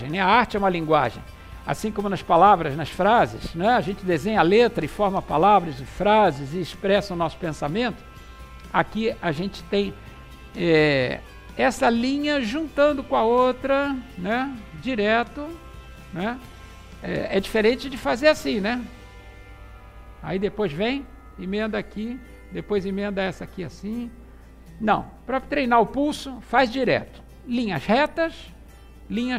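From 14.45 to 15.45 s there is a brief channel delay, heard as comb filtering. One channel runs late by a tiny amount, around 0.02 ms, which fits a one-sample offset. When the two channels are summed to mono, the shared content cancels at evenly spaced frequencies. With a gap this small, the first notch sits up near 20 kHz. The result is a faint dulling of the very top end for about a second.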